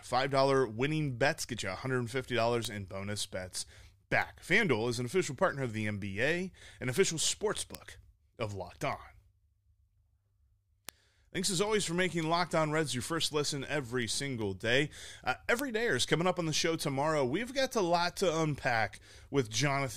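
The receiving device's clock is not locked to the sender's across the digital link, so from 0.29 s to 19.9 s the two slip past each other, each slip dropping or repeating a sample. The result is word clock ticks, roughly every 0.4 s, some fifty sharp clicks of uneven strength, which points to a clock mismatch of roughly 50 parts per million.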